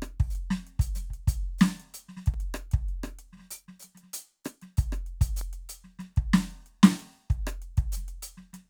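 At 2.34 s and 5.41 s the music drops briefly to digital silence, a block of digital silence lasting about 4 ms and then 0.36 ms. The hard cut out and back is heard as a tick rather than a smoothed dropout.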